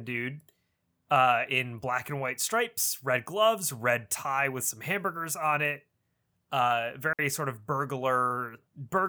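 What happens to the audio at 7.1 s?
At 7.13 s the speech just drops out for about 60 ms, back by 7.19 s. That's a digital wireless dropout. The radio link lost too much data to rebuild the audio, so the receiver muted itself with a very quick fade rather than pass along garbage. You hear a clean little hole of near silence, with no crackle or noise burst on either side.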